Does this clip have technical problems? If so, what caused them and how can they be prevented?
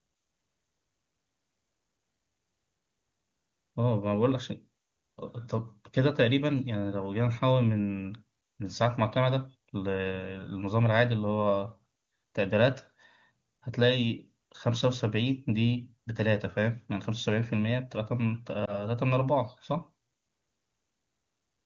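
Yes. Lost AMR speech frames occur between 18.66 and 18.83 s, heard as a brief dip or warble in the speech that fits a single lost frame of about 20 ms. Radio errors corrupted that frame so it failed its checksum, and the AMR-WB decoder, clear at 23.85 kbit/s elsewhere, filled the gap by repeating the last good pitch and vocal tract settings at falling gain. Stronger radio coverage and more robust channel coding or error protection would keep frames from being dropped.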